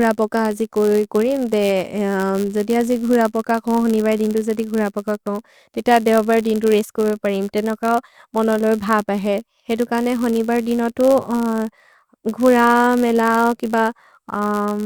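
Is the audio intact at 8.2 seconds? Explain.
No. At 8.2 seconds, as throughout the speech, a buzz near 99.6 Hz runs under the sound, which plays at 0.996 times normal speed with its timbre intact. This is a block size mismatch (padded): each shorter block is zero-filled to the reader's size, adding a brief gap every block.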